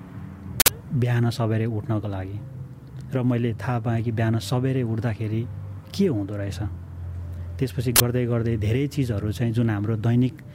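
Two short, harsh bursts of digital noise cut through the audio, the first from 0.6 to 0.68 s and the second from 7.96 to 8.0 s, each arriving abruptly at a loud level. This is an uninitialised buffer fault: a block was sent for playback before any audio had been written into it, so whatever stale memory it held was read out as samples. The burst lengths fit blocks of 80 ms and 40 ms.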